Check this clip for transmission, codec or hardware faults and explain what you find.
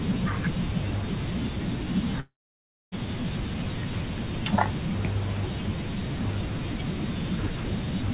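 There is one fault, a long network dropout from 2.2 to 2.94 s. The concealer stretches the last sound into a fading buzz, then about 0.6 s of near-silence, and speech resumes with about 0.72 s lost. That is likely packet delivery stopping. Unlike brief packet-loss clicks or a clean mute, the gap fades out first. The call path's G.711 A-law coding leaves nothing above 4 kHz.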